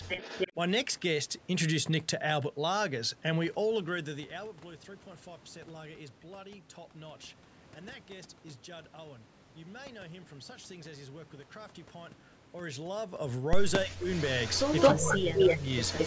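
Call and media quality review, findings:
Echo leak, 0.08–0.53 s: delayed copy of the talker at 289 ms, roughly level with the direct speech. Further leaks at 13.73–13.96 s (about 5 dB under), 14.13–15.18 s and 15.35 s to clip end (both about 5 dB over), all at 218 ms delay. Likely far-end acoustic echo canceller failing to cancel loudspeaker pickup, residual returned.

Speech suppressed in double talk, 13.85–14.08 s: loudspeaker-side speech dips by up to about 25 dB, roughly 200 ms affected in total. Again 14.94–15.7 s: drops up to about 20 dB, roughly 700 ms chopped, overlapping the echo bursts. Likely echo canceller misclassifying overlapping talk as echo and attenuating both.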